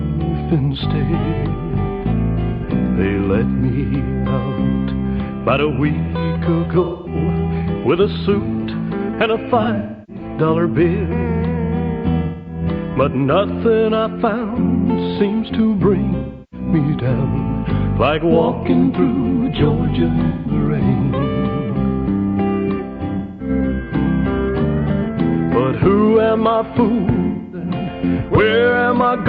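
AAC frame loss with concealment breaks the audio at 2.53, 6.84, 9.61, 12.21, 16.18, 20.27, 23.18 and 27.27 s, each gap lasting about 0.1 to 0.4 s. The decoder refills each gap from the last good spectrum, producing smeared, noisy, phasey patches. On a spectrogram these show as frozen, blurred bands.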